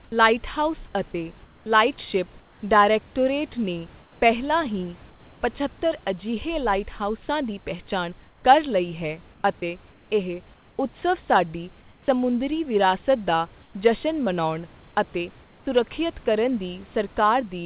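In the pauses at 0.04, 1.44, 4.02, 8.28, 11.82 and 13.62 s, before "ਲਾਈਟਹਾਊਸ ਅਤੇ" and "ਸੁਰੱਖਿਅਤ ਕਰਨ" and after "ਲਾਈਟਹਾਊਸ ਅਤੇ", the room background turns flat and featureless, about 3 dB quieter at 0.04 and 11.82 s. This is likely comfort noise in place of the background: transmission halted during silence and the receiver synthesised steady noise, band-limited like the call audio to nothing above 4 kHz.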